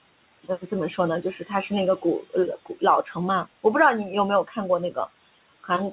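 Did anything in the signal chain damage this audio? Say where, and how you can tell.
Yes. Throughout the recording the background sinks away between phrases and swells back up underneath the speech. These are noise suppressor artifacts from the call-processing stage. The suppressor estimates the steady noise in each frequency band and attenuates those bands frame by frame, here by about 20 dB. The room noise sits only about 16 dB below the speech, so the gain keeps switching between gaps and speech.

The same stage also produces speech cut by the noise suppressor. Parts of the speech drop out or go faint at 0.44–0.72 s, 1.22–1.51 s, 3.03–3.17 s and 4.44–4.57 s. Within each span only about 0.1 to 0.15 s is actually affected, and the speech dips by about 11 to 14 dB. The suppressor mistook these low-level speech components for noise and turned them down along with the background. This happens on top of the G.711 mu-law call path, which has nothing above 4 kHz.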